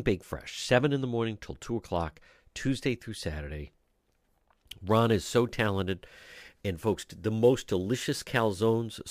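From 4.87 s to the end of the speech, a fine hiss and grittiness rides on the voice, strongest on loud and bright sounds and gone in pauses. This is sample clock jitter: timing wobble of a few microseconds leaves an error roughly 30 dB below the signal.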